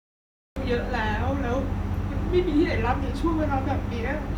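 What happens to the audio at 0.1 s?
A cut-off start covers 0.1 s: the audio is digital silence from 0.0 to 0.56 s because capture began late. At 0.56 s the speech enters abruptly in the middle of a sound, with no natural attack or fade-in.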